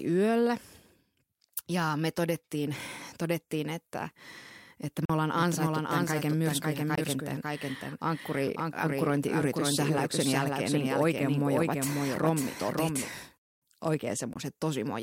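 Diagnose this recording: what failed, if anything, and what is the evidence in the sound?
At the playback stage, the speech cuts to silence three times and resumes as if it had played on: 5.05 to 5.10 s (about 41 ms, fitting two lost packets), then 6.95 to 6.98 s and 14.33 to 14.36 s (about 20 ms each, one packet). This is likely a Bluetooth dropout. The waveform goes flat, and the spectrogram shows clean full-band vertical gaps.

From 5.35 s to 13.09 s a doubled audio track runs under the speech. A full-band copy trails by roughly half a second, about 5 dB quieter, with no decay or room colour, and it starts and stops abruptly. The likely cause is a second, slower capture path at the routing or edit stage. On a spectrogram the speech patterns repeat shifted about 0.5 s later.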